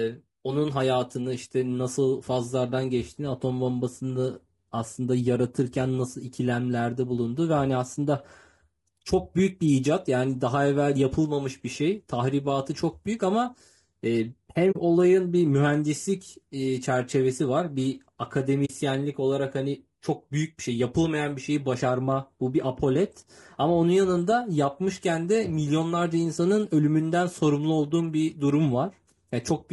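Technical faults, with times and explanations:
Throughout: low-delay AAC compression. The speech sounds rough and grainy across the whole clip. Noise fills the gaps between the pitch harmonics, and the top band sounds thin and synthetic. The likely cause is AAC-ELD, the low-delay codec used in video calls. Its short frames of about 20 ms resolve pitch harmonics poorly. The damage is plainly audible, which points to a low bitrate of around 32 kbps.
14.71 to 14.76 s and 18.65 to 18.70 s: AAC frame loss with muting. At each point the speech drops out for about 40 ms, then returns. The decoder had no data for that stretch and set its spectrum to zero, which fits two lost frames each time. The overlapping windows fade the sound down and back up. Each gap is a soft-edged hole, not a hard cut.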